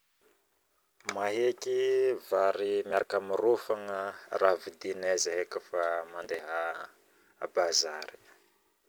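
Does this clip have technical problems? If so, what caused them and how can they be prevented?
Yes. Processor overload crackle tears the speech at 2.91–3.08 s and 6.24–6.40 s. About ten buffers of around 10 ms missed their deadlines and were skipped, leaving hard-edged gaps: clustered waveform dropouts and vertical spectrogram streaks. Lowering processor load or enlarging the buffer prevents it.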